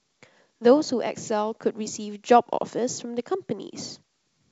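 The speech comes through G.722 wideband telephone coding with nothing above about 7.7 kHz, at most a faint trace of coding damage, and a character that fits the full 64 kbit/s mode.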